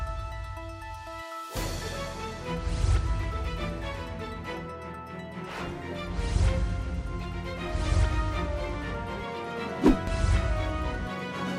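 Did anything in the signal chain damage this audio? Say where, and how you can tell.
No, nothing in the signal chain stood out as damaging this audio when I listened to it.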